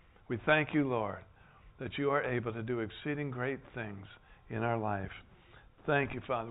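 Nothing goes wrong anywhere in the audio; there's simply no technical fault to point to.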